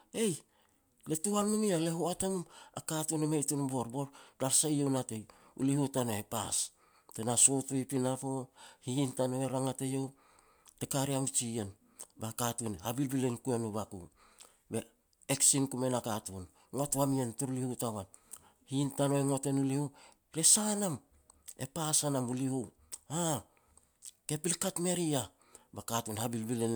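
No technical faults can be heard anywhere in this recording.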